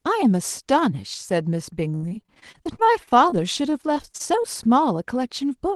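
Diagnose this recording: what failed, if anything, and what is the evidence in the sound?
Repeated packet loss on the network, 1.95 to 4.46 s: each gap, up to 70 ms, was filled by stretching prior sound, leaving choppy, robotic speech.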